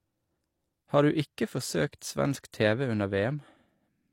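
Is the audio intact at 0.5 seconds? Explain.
No. At 0.5 seconds, as across the whole clip, the speech carries the marks of low-bitrate audio saved at a high bitrate. Nothing sounds above 16.3 kHz, and the thin, smeared texture of a heavily compressed earlier encoding remains. The likely cause is a low-bitrate HE-AAC pass, around 32 kbit/s, later re-encoded as a large MP3. That second encoding could not restore the detail the first one discarded, so the dull, processed quality persists despite the bigger file.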